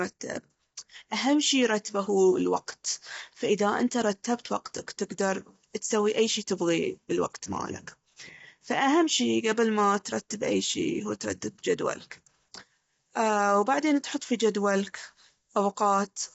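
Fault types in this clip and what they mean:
Low-delay AAC compression: The speech sounds rough and grainy, with noise filling the gaps between harmonics and nothing above 7.7 kHz. This is likely AAC-ELD, whose short frames resolve pitch poorly; the damage fits a bitrate around 24 kbps.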